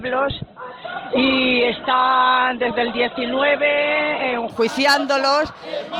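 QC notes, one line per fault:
0.0–4.5 s, adaptive stream starting at a low bitrate: the player opened on a low-quality rendition, and the sound is dull and band-limited with stronger codec smearing, with nothing above 4.2 kHz, which fits a very low Opus rate near 12 kbit/s. At 4.5 s it steps up without a gap to a fuller rendition, likely around 64 kbit/s. On a spectrogram the top edge jumps sharply from 4.2 kHz to a much higher ceiling, while the waveform stays continuous.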